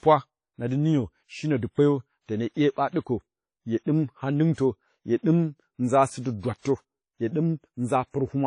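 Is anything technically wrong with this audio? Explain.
Yes. Throughout the clip there's plainly audible WMA compression, likely from a low-bitrate encode around 32 kbps. The transform coder discarded weak detail and nothing survives above 10.1 kHz, so the speech sounds dull, washy and ringing, with a hiss that swells and fades with the voice.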